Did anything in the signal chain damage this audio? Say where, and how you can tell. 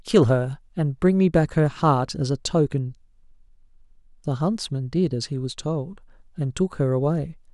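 No, I can't hear damage at any stage of the chain in this speech recording.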